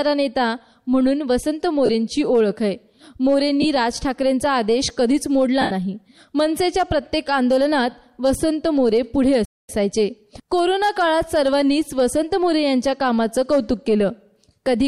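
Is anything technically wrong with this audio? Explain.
Yes, there are two problems. First, lost LE Audio frames at 1.86 s (30 ms), 3.62 s (22.5 ms) and 5.61–5.71 s (90 ms). The LC3 decoder keeps replaying the last spectrum with scrambled phase, so tones smear into noise, and the longer gap fades away. Second, there's a playback stall at 9.45–9.69 s. The sound cuts to silence for about 0.24 s and then carries on, likely because the player starved for data or its thread got blocked.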